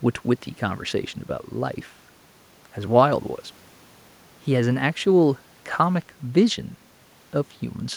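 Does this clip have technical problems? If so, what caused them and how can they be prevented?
No, nothing technical goes wrong anywhere in this speech recording, so there's nothing here to trace back or guard against.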